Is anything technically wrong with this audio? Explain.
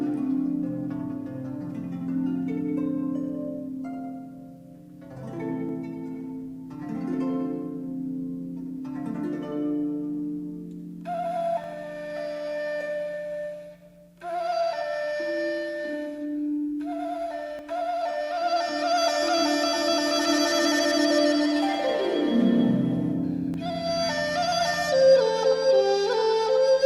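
Yes. There are four skips, at 5.69, 11.64, 17.59 and 23.54 s. Each is a short jump where roughly 50 ms of audio goes missing between chunks. The even spacing likely comes from a recorder working in 6-second chunks and dropping a moment at each handover. The two sides are butted together with no gap, so the sound lurches forward. On a waveform each spot shows an abrupt discontinuity, and a spectrogram shows a vertical seam where the patterns don't line up.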